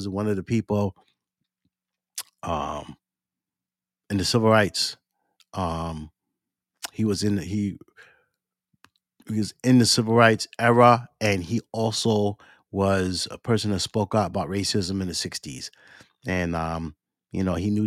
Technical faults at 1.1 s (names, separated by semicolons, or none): none